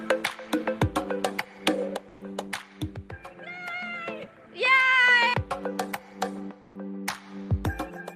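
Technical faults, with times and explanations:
0.0–5.64 s, input switched to a poorer device: the band stops at 13 kHz and a faint new noise floor sits roughly 45 dB below the signal, with no gap and no real level shift at the change. This likely reflects a narrower-band input in use before switching back.
2.08–2.21 s and 6.61–6.75 s, comfort noise in place of the background: for 130 ms and 140 ms the background, about 28–29 dB below the loud parts, turns into flat, featureless hiss, dropping about 2 dB and about 4 dB respectively. This is likely discontinuous transmission, consistent with Opus DTX.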